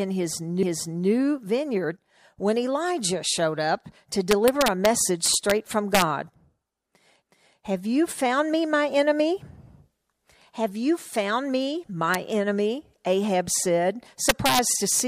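From 0.63 to 1.09 s, repeated frames: a block of about 0.46 s is played twice, so the speech stutters back on itself and runs 464 ms longer. An exact replay like this, rather than a fading copy, rules out echo.

Integer overflow follows at 4.31–4.86 s, 5.26–5.51 s, 5.95–6.02 s, 12.14 s, 14.29–14.59 s and 15.00 s. Peaks pushed only about 0 to 3 dB past the limit wrap to the opposite sign, giving violent cracks far harsher than clipping's flattened buzz.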